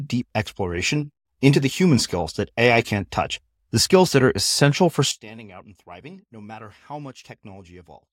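At 5.11 s, right after "that are essential for", the speech suddenly drops by about 20 dB. It stays that way to the end of the clip. The centred voice almost vanishes, leaving a faint residue. The likely cause is one channel inverted: one stereo side has flipped polarity. When the two sides are summed to mono, their shared content cancels, and only the small difference between them survives.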